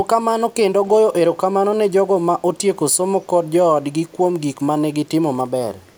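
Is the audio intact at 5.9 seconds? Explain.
No. From 5.81 s to the end, an echo leak adds a very faint copy of the speech trailing 272 ms behind. It is likely a far-end loudspeaker echo the canceller missed. The distinct fixed delay separates it from room reverberation's smooth tail.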